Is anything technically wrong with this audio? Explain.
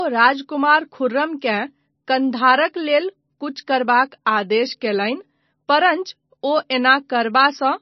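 Yes. Throughout the speech there is heavy damage from likely MP3 compression, consistent with a very low bitrate around 24 kbps. Short of bits, the encoder removes everything above 6 kHz and drops weak frequency lines frame by frame, leaving dull, watery, swirling speech with chirpy s sounds and smeared attacks.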